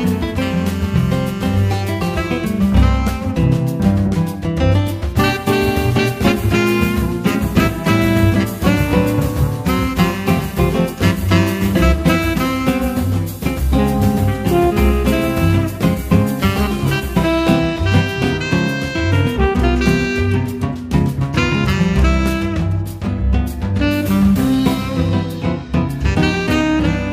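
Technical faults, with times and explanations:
No technical fault can be heard anywhere in the signal, which holds steady with no audible breaks or damage.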